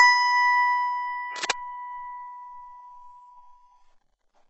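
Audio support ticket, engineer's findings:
Likely HE-AAC compression at a very low bitrate, consistent with about 8 kbps. Top band rebuilt by replication, nothing above 8 kHz; heavy damage, gritty metallic treble throughout music.

Cable scratch noise, 1.36–1.51 s, likely worn cable or connector disturbed. Contact resistance fluctuating, dense uneven scratching burst roughly as loud as the music.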